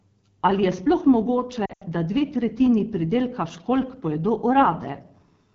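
Throughout, the AMR wideband (HD Voice) codec runs at 8.85 kbit/s, one of its lowest rates, so its coarse vocal tract model leaves the speech plainly rough and raspy.

From 1.65 to 1.83 s, after "je sploh mogoče" and before "da dve tretjini pridelka", lost AMR speech frames force the decoder to extrapolate. About 120 ms goes missing across 160 ms, with the longest gap 80 ms, consistent with six 20 ms frames. The sound smears, fades out quickly, and returns roughened.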